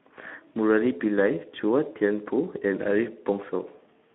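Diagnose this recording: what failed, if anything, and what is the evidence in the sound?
The failure is at the codec stage: Speex coding throughout. The speech sounds hoarse and grainy, held within about 200 Hz to 3.5 kHz, which fits a narrowband setting near 11 kbps. Too few excitation bits leave harmonics smeared into noise on a spectrogram, with nothing above 3.9 kHz.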